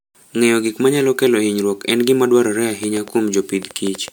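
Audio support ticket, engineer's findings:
Swirly, hollow, smeared sound throughout, with blurred attacks. Generation loss, likely from repeated MP3 re-encoding, around five passes, fitting a 128 kbit/s chain. Spectrogram shows speckled holes and smearing between harmonics, with nothing above 20.1 kHz.

Train of clicks from 2.84 to 4.09 s, right after "hinyruok en gima dwarore". About seven same-shaped pops at about 5.6 per second, unevenly spaced, peaking around 10 dB over the signal. Likely interface fault or nearby-equipment interference. Waveform shows narrow repeated spikes; spectrogram shows thin vertical lines.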